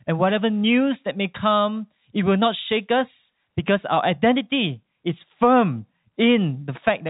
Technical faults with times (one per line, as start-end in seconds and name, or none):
none